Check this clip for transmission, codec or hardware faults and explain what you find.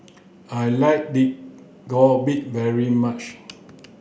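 The speech signal shows no transmission, codec or hardware faults.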